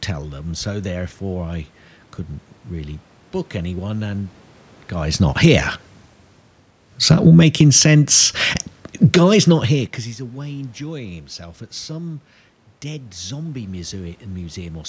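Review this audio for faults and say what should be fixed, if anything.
Automatic gain falling at 4.98–5.6 s (about 4 dB) and 6.95–9.99 s (about 5 dB): the control cut its gain, so the envelope shrinks and the background noise dims with it.

Automatic gain rising at 5.52–5.9 s (about 3 dB) and 7.83–11.68 s (about 5 dB, ending before "some dead zombie"): the gain climbs back, and the waveform and noise floor on the spectrogram swell together.

The talker also shifts near 5.0 and 9.5 s, which is ordinary and not a fault. Slowing the control's attack and release, or fixing the input gain, would prevent this.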